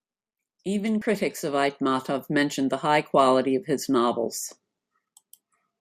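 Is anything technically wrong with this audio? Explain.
Yes. At about 1.01 s, compressed frames are skipped. Roughly three frames of 24 ms each never play, so the speech jumps ahead by around 70 ms. The words cut forward abruptly at the join.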